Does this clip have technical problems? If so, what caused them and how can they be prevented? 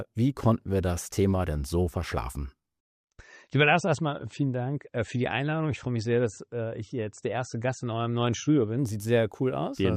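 Yes. From 2.79 s to 8.79 s the adaptive stream switched to a lower bitrate: the connection slowed, so the player changed to a leaner encoded version and later switched back. The sound changes abruptly with no gap. Codec artefacts thicken, which fits a drop from MP3 at 128 kbit/s to 32 kbit/s. To prevent it, give the connection more headroom or buffer further ahead so the player has no reason to downshift.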